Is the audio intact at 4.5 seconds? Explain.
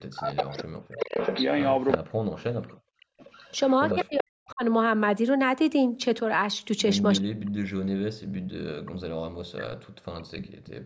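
No. At 4.5 seconds the speech is caught in a dropout that runs from 3.91 to 4.63 s. The voice sinks by a large amount, around 40 dB at its deepest, for most of that stretch. This sounds like speech suppressed in double talk. The likely cause is that the echo canceller, hearing both directions active at once, could not tell the near talker from returned loudspeaker echo and attenuated the whole microphone signal.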